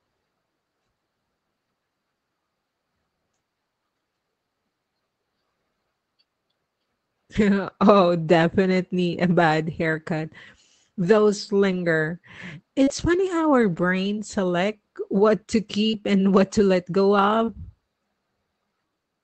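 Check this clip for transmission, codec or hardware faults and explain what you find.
There is one transmission fault: scattered short gaps between 7.35 and 17.49 s. A few packets, roughly three, were lost or arrived late. The receiver covered each hole by extending the preceding sound. About 80 ms of speech was missing, the longest single gap only around 40 ms, and about 200 ms was rebuilt in total. The speech stays clear, with brief ticks, smears or hiccups where each patch sits. The call path's upper limit near 8 kHz fits Opus at roughly 24 kbps.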